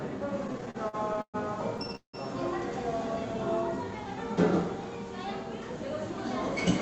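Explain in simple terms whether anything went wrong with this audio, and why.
Yes, two things went wrong. Between 0.47 and 1.36 s, and again between 1.78 and 2.15 s, the sound shows repeated stalls (stutter). The data arrived late, so the player kept holding the last bit of sound, up to 0.18 s at a time, until it could continue. It sounds choppy and jerky, but nothing is lost.

From 3.77 to 4.16 s there is a jitter buffer slow-down. Here the player stretched the sound to build a small reserve, running at about 89% speed and adding about 50 ms. Unlike the stutter, this is smooth, just drawn out at the same pitch.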